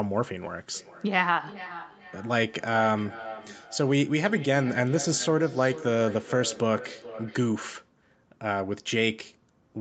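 From 0.74 s to 7.8 s the speech carries a feedback echo between two devices. Each phrase returns roughly every 0.4 s, thinner and ringing, peaking about 15 dB below the speech. A second device's playback is re-entering this microphone, beyond its own echo canceller's reach.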